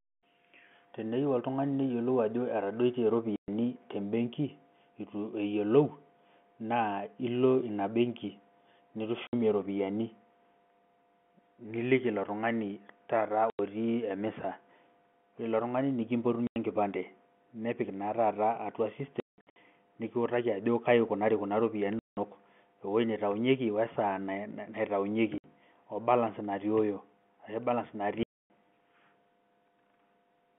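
Speech over a narrowband telephone line, with the sound abruptly chopped by dead holes at 3.36 s (120 ms), 9.27 s (60 ms), 13.5 s (90 ms), 16.47 s (90 ms), 19.2 to 19.56 s (scattered gaps, longest 180 ms), 21.99 s (180 ms), 25.38 s (60 ms) and 28.23 s (270 ms). This is packet loss filled with silence: every gap is a multiple of 30 ms, which fits 30 ms packets going missing and the receiver playing nothing in their place.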